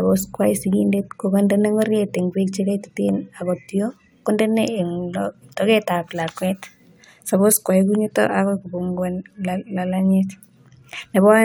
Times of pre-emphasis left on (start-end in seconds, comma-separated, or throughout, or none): none